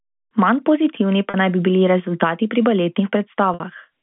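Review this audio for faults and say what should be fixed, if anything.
Packet loss with pitch repetition at 1.30 s, before "naj bi bili rezultati", and at 3.54 s. Looping the last pitch period fills the 40 ms gap with a buzzy hold, while in the 60 ms gap it fades out into silence before the speech returns with a short cross-fade. Adding forward error correction or redundant packets on the network path would prevent these gaps.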